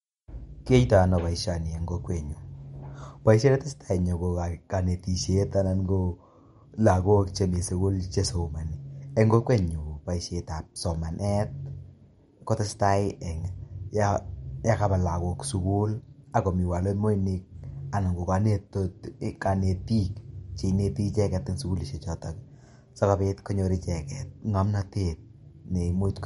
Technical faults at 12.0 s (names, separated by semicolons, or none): MP3 compression